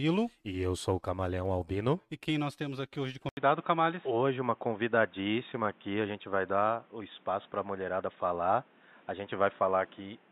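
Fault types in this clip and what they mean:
Input switched to a poorer device: at 3.29 s, just after "temos aqui hoje de", an 80 ms gap appears, then the speech continues with nothing above 3.8 kHz, likely a change to another microphone or headset, with a new noise floor around 30 dB down and no level change.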